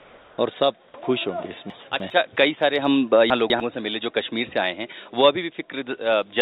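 From 0.0 to 0.38 s, a smooth, featureless hiss replaces the background, about 3 dB quieter. This is comfort noise in place of the background, likely from paused transmission.

At 1.7 to 2.1 s, chunks play out of order. A 100 ms chunk lands three chunks late, giving a jumbled moment. At 3.3 to 3.6 s, one lands two chunks late.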